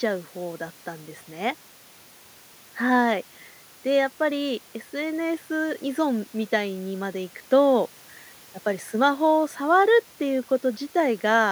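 There are no technical faults in this speech to describe, at any point in time.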